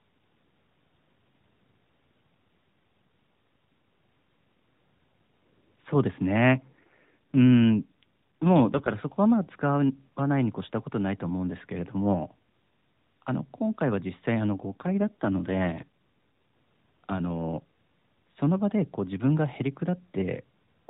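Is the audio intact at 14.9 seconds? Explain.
No. From 14.72 to 15.87 s an AMR rate drop occurs: the link forces the mobile codec to a lower mode, which fits a step down from about 12.2 to 5.9 kbps. The voice turns rougher and more synthetic, without any gap or narrowing of the band.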